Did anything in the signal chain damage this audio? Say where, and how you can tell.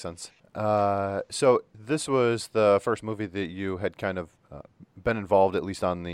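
No, nothing in the signal chain audibly damaged this speech.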